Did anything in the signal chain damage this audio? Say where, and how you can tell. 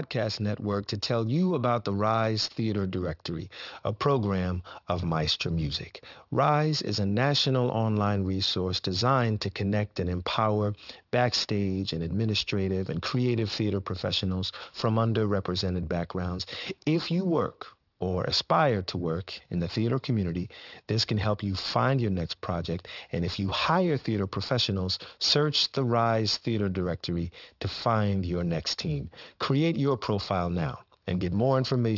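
Yes. Aliasing runs through the whole clip, introduced at a sample-rate conversion stage. Sibilants sound gritty and metallic, and the spectrum runs hard up to 6 kHz, which fits a drop from 48 kHz to 12 kHz without an anti-aliasing filter. High frequencies fold back as false tones roughly 15 dB below the speech.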